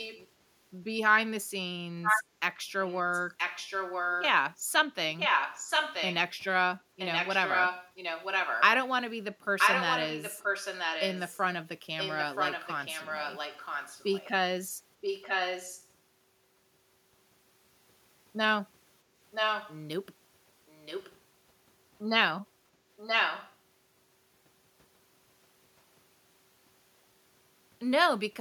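A delayed second copy of the speech trails the original by about a second, 978 ms, in six stretches: 0.0–0.28 s, 2.02–4.26 s, 5.18–8.62 s, 9.58–15.88 s, 19.31–21.17 s and 22.97–23.56 s. It starts faint, then grows to nearly the level of the speech itself. This is echo leak, likely from a loudspeaker-equipped far end whose echo canceller let its microphone's pickup of the call be sent back.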